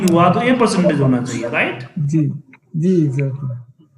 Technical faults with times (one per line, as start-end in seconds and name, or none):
1.19-2.22 zipper noise